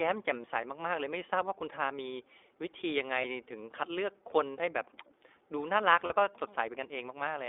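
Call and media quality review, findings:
iLBC codec, whole clip. Speech band-limited to roughly 300 Hz to 3.6 kHz. Roughness is plainly audible, with a slightly synthetic tone. The codec codes each frame's excitation on its own at a low rate. The grit fits a 15.2 kbps mode with 20 ms frames. Nothing above 3.6 kHz gets through the narrowband path.

Lost iLBC frames, 0.42 to 0.47 s. A brief held, buzzy, vowel-like sound. The decoder repeats the last pitch cycle mixed with noise, over a gap that fits one 20 ms frame.
Lost iLBC frames, 3.22 to 3.24 s. Same concealment, shorter smear. Speech comes back almost at once because each frame decodes on its own.
Lost iLBC frames, 6.06 to 6.14 s. Longer buzzy hold that fits two lost frames. Clean decoding resumes right after.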